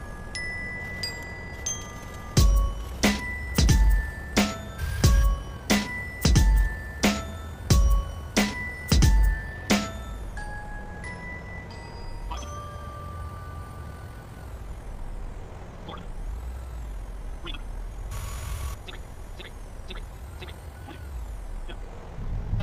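No technical faults can be heard anywhere in the audio.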